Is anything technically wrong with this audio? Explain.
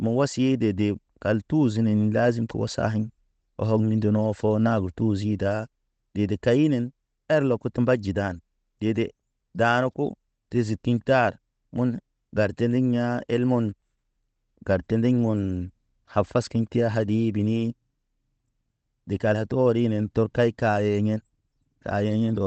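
Yes. The sender and receiver clocks disagree, and the receiver keeps correcting for it.

Clock drift between sender and receiver runs through the whole clip. The sender's clock runs roughly 4 percent fast. Audio therefore arrives a little faster than the receiver plays it out. The jitter buffer keeps filling up. To stop it overflowing, the receiver has to discard small pieces of audio again and again. The result is a faint, recurring timing unevenness that never settles.

Repeated timing corrections are heard from 0.15 s to 22.35 s. These are the cuts themselves. Each removes a short slice of speech, and every edit goes the same way, shortening rather than stretching. The net pace is about 104 percent of normal. The cuts fall at uneven intervals. They come across as slight hiccups and a gently rushed, unsteady tempo, and the band-limited call sound, topping out at 8 kHz, carries through the same stretch.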